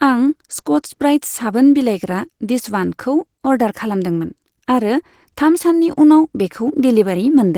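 Speech affected throughout by Opus voice compression: coarse, hoarse and slightly robotic hybrid SILK-plus-CELT coding, with plainly audible damage that fits a bitrate around 16 kbps.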